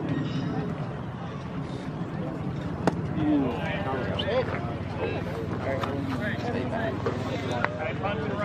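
No technical faults can be heard anywhere in the audio; the signal stays steady and intact throughout.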